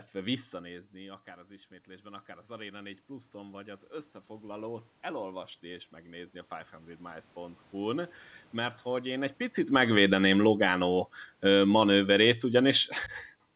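From 0.21 to 8.01 s there's automatic gain rising: the voice dropped about 17 dB, so the gain crept up about 13 dB, swelling voice and room noise together before "mert hogy én egy".

Right after "mert hogy én egy", automatic gain falling runs from 9.61 to 13.01 s: the gain comes down about 7 dB, and everything sinks gradually.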